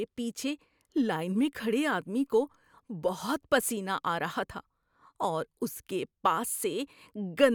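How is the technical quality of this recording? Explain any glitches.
Nothing in the recording stood out as a technical problem on listening.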